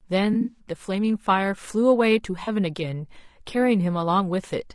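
Across the whole speech clip the voice is rough and grainy, with noise filling the gaps between harmonics and a thin, synthetic-sounding top band. This is likely low-delay AAC compression (AAC-ELD), whose short frames resolve pitch poorly, and the damage fits a bitrate near 32 kbps.

From 0.33 to 0.59 s there is AAC frame loss with concealment: about 120 ms of audio is missing in pieces across a 200 ms stretch, the longest gap around 70 ms. The decoder rebuilds each gap from the previous spectrum, producing a smeared, noisy, phasey patch. A shorter 40 ms loss at 2.43 to 2.49 s gives a brief similar smear.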